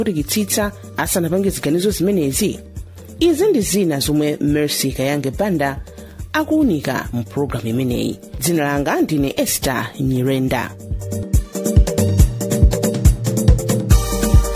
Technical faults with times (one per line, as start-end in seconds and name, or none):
none